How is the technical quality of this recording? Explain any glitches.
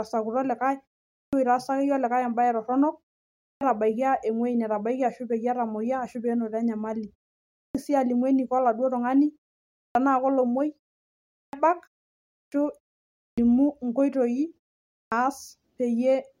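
The recording has a recurring fault: clipped start after a pause, at 1.12, 3.38, 7.53, 9.72, 11.29, 12.3, 13.16 and 14.9 s. After each silence of 0.33 to 0.58 s, the output device needs about 0.21 to 0.24 s to wake, so speech bursts in abruptly with its opening sounds missing. Ordinary muted pauses only drop the background and keep every sound, which makes them different from this fault.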